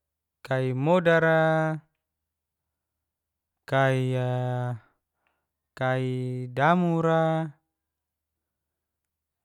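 No technical faults can be heard anywhere in the recording.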